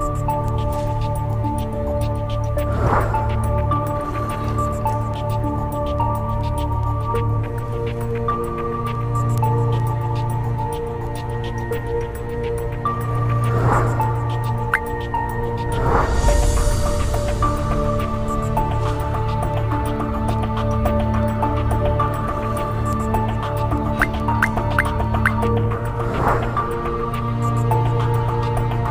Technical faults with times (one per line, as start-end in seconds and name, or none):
0.48-28.86 word clock ticks